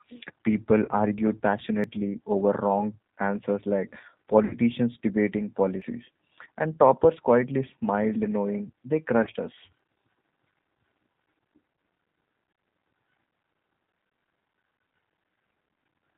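Throughout the clip the speech carries G.729 codec damage at 8 kbit/s, plainly audible. The coder rebuilds each 10 ms frame from a vocal tract filter, a pitch predictor and a few pulses, so the voice sounds rough and slightly synthetic. On a spectrogram nothing appears above 4 kHz, and the harmonics look smeared and grainy rather than cleanly striated.

At 0.85–0.90 s comes the first VoIP packet loss concealed by the speech codec. About 30 ms of audio is missing, which fits a single lost packet. The decoder stretches its last pitch and filter into a buzzy tone or coloured noise that fades. On a spectrogram this shows as a frozen, repeated spectrum that decays. The same concealment follows at 4.44–4.55 s (60 ms lost, the longest, which points to two packets in a row), 9.23–9.28 s, 11.75–11.78 s and 14.08–14.11 s (30 ms each). Each time, the voice stays weak for a short stretch afterward.

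At 1.84, 5.82 and 9.79 s there are skips from audio missing between chunks. Each loses roughly 20 ms and splices the two sides together with no silence. The steady 4-second spacing points to the likely cause, a recorder dropping audio at chunk boundaries. The waveform shows an abrupt discontinuity.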